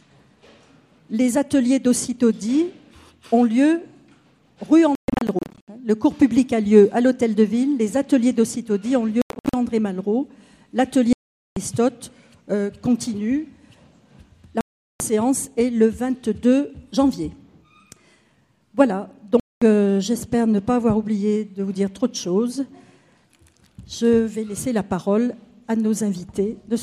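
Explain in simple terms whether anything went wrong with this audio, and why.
The sound cuts out five times, at 4.95–5.68 s, 9.22–9.54 s, 11.13–11.57 s, 14.61–15.00 s and 19.40–19.62 s, with the first two broken into several short gaps. This is likely a Bluetooth dropout: audio arrived too late and was skipped.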